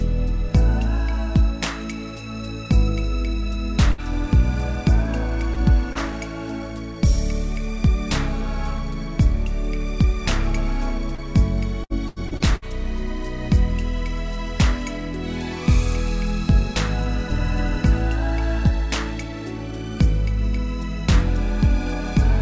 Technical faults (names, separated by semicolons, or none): burst of packet loss; short concealed packet loss; repeated packet loss (robotic sound)